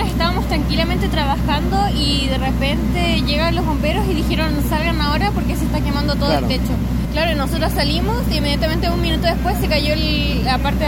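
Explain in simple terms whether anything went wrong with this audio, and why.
Nothing went wrong; no faults can be heard.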